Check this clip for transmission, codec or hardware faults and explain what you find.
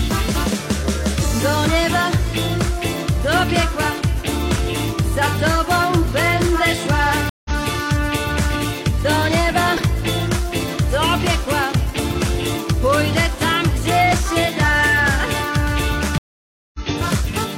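Two dropouts here, both stream reconnects. At 7.29 to 7.51 s the audio goes silent for 155 ms and picks up about a tenth of a second further on. At 16.18 to 16.80 s there's a 560 ms gap, and it comes back about 0.4 s ahead. Each time the connection dropped, the player reconnected and started a fresh decoder mid-stream, so the sound jumps forward instead of continuing where it stopped.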